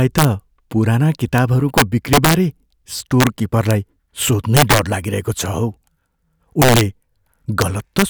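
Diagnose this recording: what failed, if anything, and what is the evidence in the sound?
Integer overflow at the sample-format conversion stage. Speech peaks driven about 4 dB too hot wrap to the opposite sign, producing harsh cracks on under one percent of samples.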